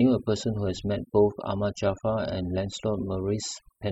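A short speech clip suffering from overdone noise removal from start to finish. The denoiser was pushed too hard, so bands near its noise estimate get pulled right down. The background drops and breaks up into twinkly specks.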